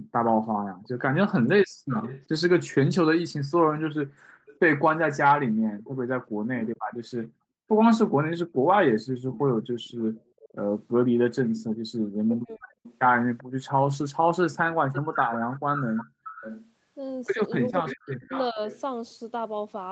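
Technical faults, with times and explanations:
0.84–2.22 s, echo leak: a faint copy of the speech about 20 dB down trails by 388 ms, likely speakerphone echo the canceller missed; a constant lag, not reverberant smear.
1.43–1.86 s, speech suppressed in double talk: the talker drops sharply, by roughly 40 dB, for under half a second, likely the canceller gating both voices while the echo overlaps. This is a dropout, not added sound.
4.47–5.91 s, echo leak: the same 388 ms delayed copy returns, weaker at about 25 dB below the speech, likely residual loudspeaker pickup rather than room reflections.
6.4–6.81 s, speech suppressed in double talk: a brief ducking of about 0.3 s, down roughly 40 dB, likely suppression during overlapping talk, heard as missing pieces.
8.75–10.49 s, echo leak: the delayed copy at 388 ms comes back at about 20 dB down, a discrete repeat, likely leaked far-end audio, unlike diffuse reverb.
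12.26–12.86 s, speech suppressed in double talk: the voice cuts away for well over half a second, dropping roughly 40 dB, likely the canceller muting during simultaneous speech.
12.87–18.81 s, echo leak: a longer, louder echo at about 15 dB down with the lag stretched to 548 ms, likely loudspeaker echo the canceller failed to remove.
17.7–18.6 s, speech suppressed in double talk: within that echo the talker is chopped down by roughly 40 dB for most of a second, likely suppression triggered by the overlap.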